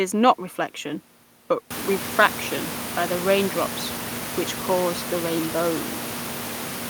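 Nothing stood out on listening to this speech, apart from the room's own background noise, which rises by about 24 dB at around one and a half seconds and then sits about 10 dB below the speech.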